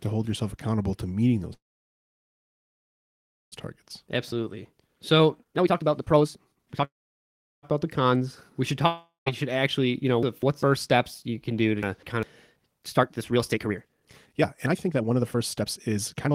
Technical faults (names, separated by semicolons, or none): call audio freeze; jitter buffer speed-up; long network dropout; chunks out of order